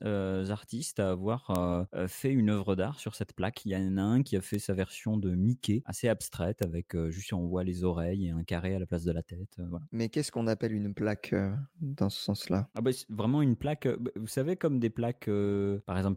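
Four bit error spikes occur in the speech. At 1.56 s, between "artistes à avoir" and "fait une œuvre d'art", a sharp tick peaks near -10 dBFS. At 4.55 s, after "a un qui a" and before "sa version de", a softer one reaches about -16 dBFS. At 6.63 s, between "assez abstraite" and "avec juste on voit", another hits about -10 dBFS. At 12.77 s, a faint tick sits near -28 dBFS. Each is a flipped bit. The sample value jumps and instantly returns. The first three fit a single corrupted sample. The last fits a run of about three. Each is a broadband click that ignores the speech.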